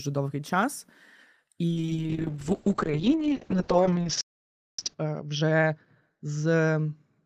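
Speech, and from 1.68 s right to the end it suffers a call bitrate drop. Up to then it's full-band and clean, but at 1.68 s the top end collapses to around 8 kHz and the texture goes rough and watery. That sounds like the call's bandwidth estimate fell and the encoder was pushed from something like 32 kbps down to roughly 6 kbps, where Opus codes coarsely and trims the highs to save bits. It never recovers before the clip ends. On top of that, at 4.21 s there's a playback stall: the audio just stops mid-flow and stays silent for about 0.57 s, until 4.79 s. The likely cause is the player running dry of data or its output thread getting blocked for that moment. It picks up again rather than jumping ahead, which leads straight into the third problem. From 4.79 s to 5.93 s there's time-compressed catch-up, where the player works off the backlog the stall left behind. It runs about 1.5 times faster than normal but keeps the pitch where it should be, so the speech sounds hurried rather than chipmunky. 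That's done by cutting out small chunks and cross-fading them together to shrink the queue.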